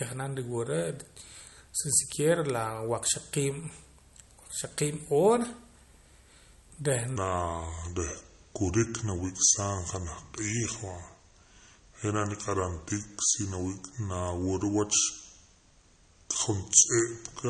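Throughout the speech there is plainly audible damage that sounds like MP3 compression, likely from an encode at a low bitrate around 48 kbps. Short of bits, the encoder keeps switching weak frequency lines on and off, giving a watery, swirly texture and metallic chirps on s sounds. A spectrogram shows speckled, flickering patches instead of smooth harmonics.

From 7.16 s to the end, the speech plays at the wrong speed, running at 0.771 times its recorded rate, likely because that section was played back against the wrong clock. Because speed and pitch change together, the voice suddenly turns deeper and slower, dropping by roughly five semitones. On a spectrogram the harmonic stripes step down and spread further apart in time at 7.16 s. In the waveform, syllables and pauses look visibly stretched from that point onward.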